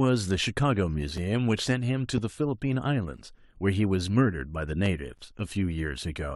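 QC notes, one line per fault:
1.17 s, 3.17 s and 5.18 s: gap between stream segments. The speech stops dead for about 4, 5 and 11 ms, spaced close to 2 s apart, which fits a new segment starting every 2 s. Each join's time stamps leave a short hole that the player fills with silence rather than dropping audio. On the waveform, the trace falls flat with vertical edges. A spectrogram shows a thin blank column, with faint full-band streaks at each hard edge.
2.18–2.20 s and 4.86–4.88 s: loud pop. A single sharp pop lasting about 24 ms sits on top of the speech, which continues beneath it, peaking roughly 10 dB above the surrounding signal. It is likely a sudden voltage step or pulse, such as a switch, static or a driver glitch, shaped by the circuitry that follows. The waveform shows a tall spike. The spectrogram shows a bright vertical stripe across all frequencies.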